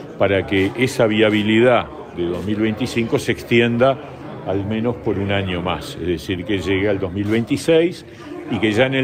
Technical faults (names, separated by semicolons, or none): none